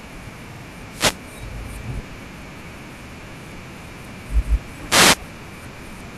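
At 0.53 s the speech stutters with repeated frames: a 52 ms block plays twice more, adding about 104 ms. From 0.88 to 1.21 s a wireless microphone noise hit appears as a short burst of static, the receiver's noise rising as the FM signal fades. Further repeated frames follow at 3.09 s, a 78 ms block played once more, and at 4.42 s, a 157 ms block, which fits roughly six frames. From 4.87 to 5.20 s a second noise hit swishes over the speech.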